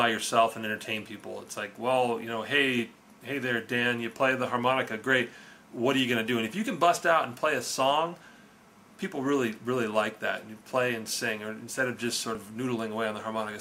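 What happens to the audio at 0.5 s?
Nothing goes wrong at 0.5 s; the audio plays through that moment intact, with no dropout, click or distortion to be heard.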